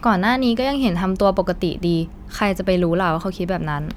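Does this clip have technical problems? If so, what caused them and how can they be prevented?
No, nothing in this speech recording stood out as a technical problem on listening, so there is nothing to trace back or guard against.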